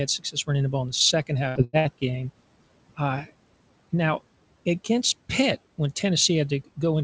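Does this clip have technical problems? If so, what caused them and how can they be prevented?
Yes. Throughout the clip, the background sinks between phrases and swells back under the speech. These are noise suppressor artifacts: the suppressor pulls down bands it judges to be steady noise frame by frame, here by about 18 dB. A gentler suppression setting, or a quieter room that lets the suppressor work less hard, would prevent this.

From 0.19 to 0.49 s the speech briefly goes faint and swallowed, with parts of it dipping by up to about 14 dB across roughly a tenth of a second. This is speech cut by the noise suppressor, which mistook those soft speech sounds for background and turned them down with it. Less aggressive suppression, or better speech detection in the suppressor, would prevent this.

At 1.49 to 1.58 s, 1.64 to 1.76 s and 1.79 to 1.88 s the sound turns into a held, fading buzz or hiss and then jumps ahead. 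These are three bursts of packet loss. The receiver stretched the last audio over each gap, then resumed with about 60, 90 and 60 ms of the original missing. A more stable network, with forward error correction or a deeper jitter buffer, would prevent this.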